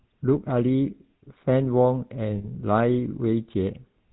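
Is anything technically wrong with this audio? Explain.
Yes. Two faults are audible in this speech.

The GSM full-rate codec runs throughout, with plainly audible damage consistent with the 13 kbps full-rate coder. It rebuilds speech from a vocal-tract filter fed by a sparse, regularly spaced pulse excitation, and it carries nothing above 4 kHz. The result is a buzzy, gravelly roughness over a dull, band-limited sound. A simple low-pass or narrowband phone line would sound muffled but smooth. This grit points to the coarse excitation model instead.

Lost GSM frames occur from 2.38 to 2.45 s. The dropout fits about 60 ms of missing data, or three consecutive frames. The decoder fills the gap by reusing the last good frame's parameters, so the sound freezes into a brief rough, metallic ring. A plain packet dropout would leave silence or a click. A stutter or repeat would replay recognisable audio. 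The ringing hold is what marks this as concealment of lost frames.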